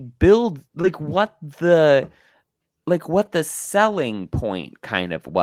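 The clip is speech with two kinds of packet fault. First, short concealed packet loss at 0.81 to 0.85 s, just before "what the". About 20 ms of audio failed to reach the decoder in time. The receiver patched the hole by extending the preceding sound for roughly 18 ms, then faded back into real audio. The result is a brief smear across that spot. Second, a lost packet rebuilt from error correction, heard twice. The first is at 0.83 to 0.85 s, overlapping the concealed gap, before "what the". The second is at 3.25 to 3.27 s, just before "the selling". Each spans 20 ms, which points to one lost packet. The following packet carried a low-bitrate copy of it, using Opus in-band forward error correction. The decoder played that copy instead, so nothing drops out. Those 20 ms sound rougher and noisier than the surrounding audio.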